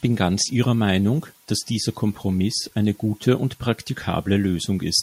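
No technical faults can be heard anywhere in this speech recording.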